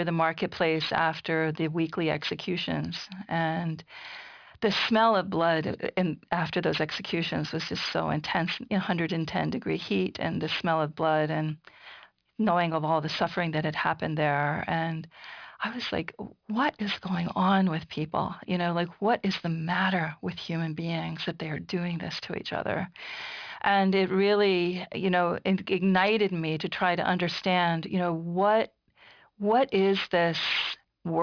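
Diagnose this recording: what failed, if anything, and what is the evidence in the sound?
Aliasing from an unfiltered downsample to about 11 kHz runs throughout. Sibilants sound gritty, and the spectrogram shows energy packed against 5.5 kHz, with mirrored components roughly 15 dB down.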